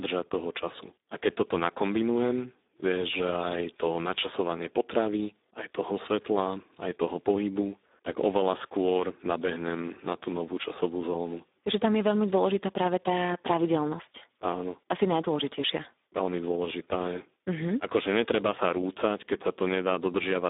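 Speech carrying Speex codec damage throughout: heavy CELP artefacts make it hoarse and noisy, consistent with roughly 8 kbps, where the excitation is starved of bits. Band-limiting to about 250 Hz to 3.7 kHz leaves nothing above 3.8 kHz.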